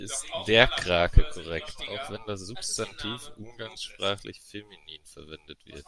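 A short speech recording with no audible technical faults: the signal holds steady throughout, with no interruptions, distortion or level problems to point to.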